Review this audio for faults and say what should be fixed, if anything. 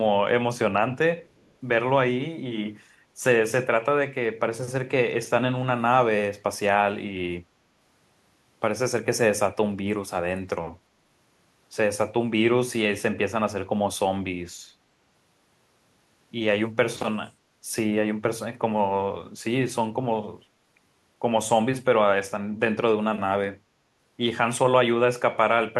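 From 1.24 to 1.52 s a very faint delayed copy of the speech trails it by about 362 ms, an echo leak, likely from a loudspeaker echo canceller letting residue through. Fix by retuning echo cancellation or using a headset.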